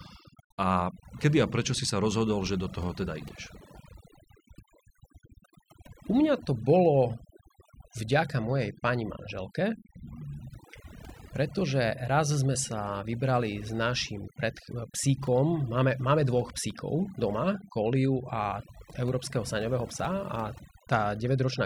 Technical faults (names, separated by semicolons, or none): overdone noise removal